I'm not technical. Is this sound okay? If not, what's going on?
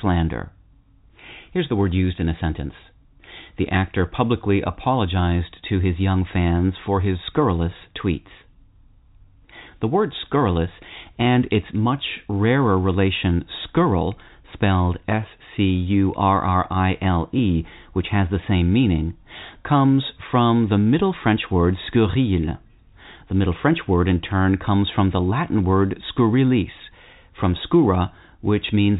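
Yes, nothing is wrong here.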